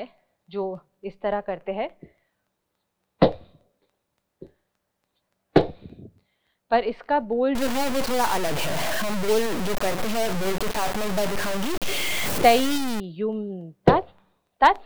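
From 7.55 s to 13.0 s the sound turns grainy and harsh, with distortion nearly as loud as the signal and moving with it. The likely cause is low bit depth without dither, truncated to 4 bits. The waveform shows coarse stair steps, and the spectrogram shows broadband haze following the sound.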